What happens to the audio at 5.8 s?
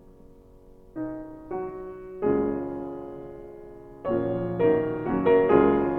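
Overlap-add ripple runs through 5.8 s, as it does across the whole clip. Windowed frames were rejoined with an overlap that doesn't sum to a steady gain, so the level swings by about 6 dB around 200 times a second, heard as a metallic buzz with extra tones around each note.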